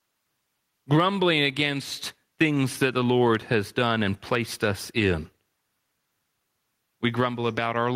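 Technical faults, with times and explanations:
Throughout, gain pumping: the level breathes the whole way through. The swing is about 15 dB, so loud and quiet passages land much closer together and everything feels squashed. That's likely a mic preamp cranked far too hot, with a fast limiter or compressor clamping it down on each loud syllable.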